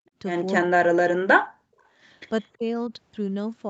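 From 0.63 to 1.78 s the speech level collapses, falling by about 40 dB at its deepest and staying pulled down for roughly a second, with the sound thinning and breaking up. A shorter dip of about 15 dB follows at 2.58 to 2.65 s. This is likely speech suppressed in double talk: the echo canceller could not tell the near talker from loudspeaker echo while both sides spoke, so it attenuated everything.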